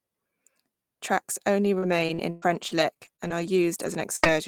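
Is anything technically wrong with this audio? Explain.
Yes. From 1.65 to 4.30 s there is repeated packet loss (robotic sound): eleven short holes, the longest 119 ms, each patched by stretching the preceding sound. Unlike a single dropout, the patches recur in quick succession, leaving choppy speech with fragments missing.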